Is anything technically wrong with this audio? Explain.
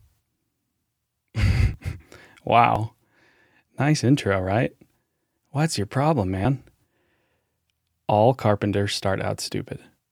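Yes. The speech has four short skips at 1.74, 2.76, 6.45 and 7.72 s, each heard as a small jump forward in the sound. This is likely a dropped buffer (overrun): the capture software failed to read its samples before the hardware overwrote them, so that stretch is lost and the surrounding audio is butted together without any gap. Three skips lose only a few milliseconds; the one at 6.45 s loses around 15 ms.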